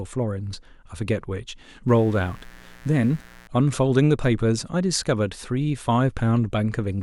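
From 1.88 to 3.47 s a steady, raspy buzz sits under the speech, about 25 dB below it. This is mains buzz at 60 Hz: switching spikes leak in twice per mains cycle, spreading harmonics of 60 Hz up into the kilohertz range.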